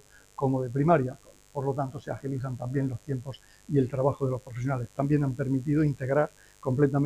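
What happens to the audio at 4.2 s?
At 4.2 s a mains buzz sits under the sound. It is not a local event. It runs through the whole clip at a steady level. The buzz comes from 50 Hz mains. Sharp switching spikes leak in twice per cycle, so harmonics of 50 Hz stack up well into the kilohertz range. That gives a raspy, edgy hum rather than a smooth tone. It stays roughly 35 dB below the main sound.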